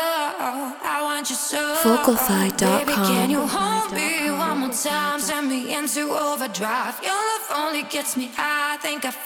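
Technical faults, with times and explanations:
1.88 to 3.17 s, train of clicks: Around seven sharp clicks tick over the sound, at about 4.7 per second. The spacing is uneven, so the ticking stumbles rather than keeping a steady beat. Each click has much the same short, hard shape and stands out from the sound by something like 15 dB. They sit on top of the audio, not inside it. The likely cause is interference from nearby equipment or a faulty connection or power supply injecting pulses.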